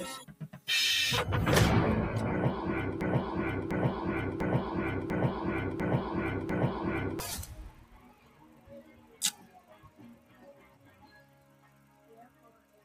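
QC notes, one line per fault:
throughout: noise suppressor applied to music or sounds. A speech-oriented suppressor is treating steady tones, ambience and decays as noise, so gain rides up and down by around 20 dB as it decides what to keep. Onsets punch through while sustained material is pulled down, which produces audible pumping and a thinned, fluttering texture across the whole clip rather than a steady level.
0.26–0.68 s: sound cut by the noise suppressor. For roughly 0.4 s the suppressor dips this passage by up to about 11 dB, so the held portion sinks and its tail is truncated instead of decaying naturally.
3.01–7.2 s: broken-record loop. A 0.70 s fragment repeats back to back, six times in a row, with identical content on each pass, so the sound stutters in place for about four seconds. This is likely a stall in playback, encoding or the stream, with the last buffered fragment resent until data resumed. 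Whatever audio belonged in that span is missing.
7.47–12.84 s: sound cut by the noise suppressor. Across roughly 5 s the suppressor pulls steady and fading content down by up to about 12 dB, so sustained parts drop away and decays are clipped short while transients keep their level.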